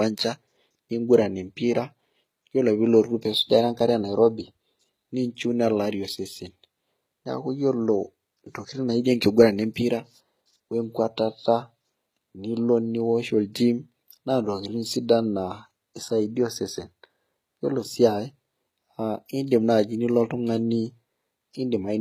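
Right through the speech there's HE-AAC compression, likely at a bitrate around 20 kbps: the treble is rebuilt rather than kept, so s sounds go gritty and lispy.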